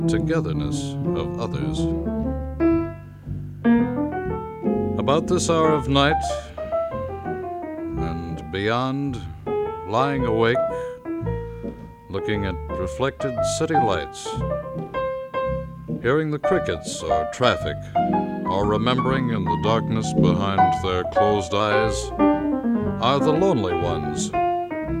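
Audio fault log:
19.21–21.60 s, drift correction step: speed slows 5.3% and pitch drops about 94 cents, then snaps back, likely from clock-matching software changing rate in one jump.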